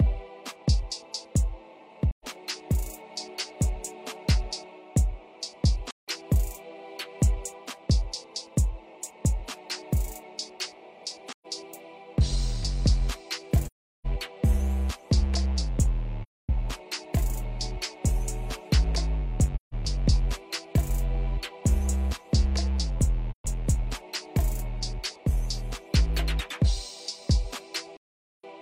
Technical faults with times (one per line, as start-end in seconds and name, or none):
2.10-2.25 AAC frame loss with muting
5.90-6.08 AAC frame loss with muting
11.32-11.46 AAC frame loss with muting
13.65-14.06 AAC frame loss with muting
16.22-16.49 AAC frame loss with muting
19.55-19.74 AAC frame loss with muting
23.30-23.45 AAC frame loss with muting
27.97-28.44 AAC frame loss with muting